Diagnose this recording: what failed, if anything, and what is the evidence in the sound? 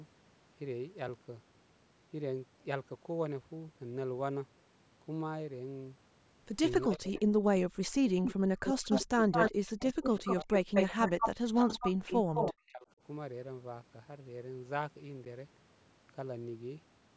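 Speech suppressed in double talk, at the call processing stage: the speech dips by up to about 40 dB at 6.86–8.05, 8.60–11.71 and 12.27–13.01 s, likely because the echo canceller ducked both talkers.

Echo leak, also at the call processing stage: a copy of the speech trailing by about 203 ms, nearly as loud as the original, at 8.25–8.34, 8.65–8.98 and 9.32–12.53 s, likely loudspeaker pickup the canceller missed.

Block of digital silence, at the driver or buffer stage: an 8 ms gap, heard as a tick or dip, at 15.25 s, fitting a 128-sample buffer left unfilled in time.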